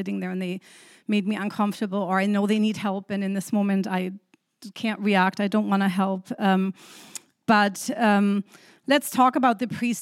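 No technical faults can be heard anywhere in the speech.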